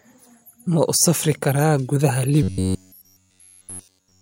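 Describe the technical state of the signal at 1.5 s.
At 1.5 s the speech signal is intact, with no dropout, clipping, distortion or other fault to be heard.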